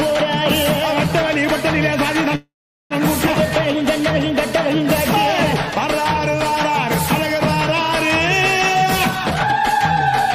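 From 2.35 to 2.93 s, a call audio freeze: delayed packets likely drained the jitter buffer, so the last sound is stretched into a fading buzz and then about 0.42 s of silence, before the audio resumes where it stopped.

At 3.26 to 3.30 s, a skip ahead: roughly a fifth of a second of audio was dropped while later packets waited, so playback jumps forward with an almost seamless join.

From 8.85 to 9.96 s, a jitter buffer speed-up: the buffer held excess audio, so the receiver repeatedly cut pitch-period-sized pieces, about a third of a second in total. The sound runs at 127% speed at the same pitch and feels hurried.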